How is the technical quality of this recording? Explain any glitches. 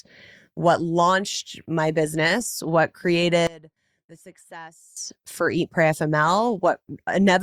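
A polarity fault interrupts the speech for about 1.5 seconds. From 3.47 s to 4.97 s, just after "launched my business what", the level drops by about 22 dB. This is likely one channel inverted: with one stereo channel's polarity reversed, everything common to both sides cancels when they are summed to mono. The centred voice nearly vanishes, leaving only a faint residue of the small differences between the channels until the full sound returns.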